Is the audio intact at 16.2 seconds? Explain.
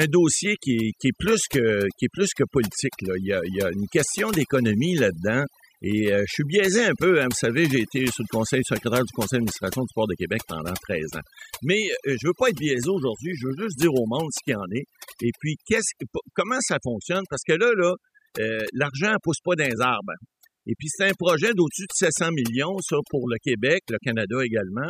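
No. Overdone noise removal is present at 16.2 s and across the whole clip. The noise reduction pushes individual frequency bands down or off whenever they sit near its noise estimate, taking quiet parts of the speech with them, so the background breaks into twinkling, warbling specks.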